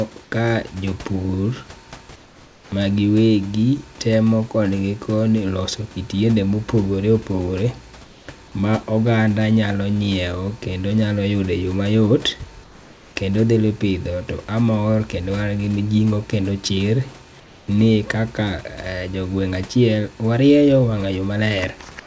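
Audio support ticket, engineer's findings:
Comfort noise in place of the background, likely from discontinuous transmission on the sender: speech detector gated off during pauses, receiver substituting synthetic noise. Heard at 2.16–2.72 s (ends just before "ma giwegi"), 8.04–8.28 s, 12.64–13.16 s, 17.40–17.68 s. Real room background, about 27–29 dB below loud speech, becomes flat, textureless hiss about 2–3 dB quieter, then snaps back at speech onset. Wideband call path, nothing above 8 kHz throughout.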